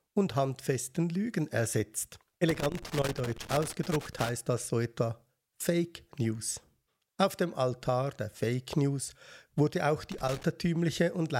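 From 2.49 to 4.29 s the speech is broken up by loose connector crackle, and a shorter burst returns from 10.12 to 10.43 s. A worn or dirty contact is making and breaking as it shifts, chopping the signal into irregular scratchy crackle.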